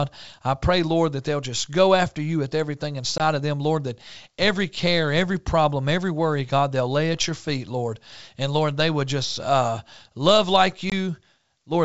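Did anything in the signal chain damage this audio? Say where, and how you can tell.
Yes. Hard-edged silent holes at 3.18 to 3.21 s, between "after you with everything" and "of them", and at 10.90 to 10.93 s after "uh uh love like". This is packet loss on an ADPCM call: about one 20 ms packet vanished each time, knocking the decoder's predictor and step size briefly out of step with the sender's.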